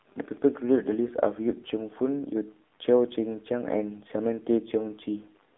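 From start to finish the speech has gone through an AMR narrowband mobile codec. Nothing passes above about 3.8 kHz and the line band runs roughly 250 Hz to 3.6 kHz, so it's thin and boxy. The plainly buzzy, synthetic edge points to a low rate like 7.4 kbps.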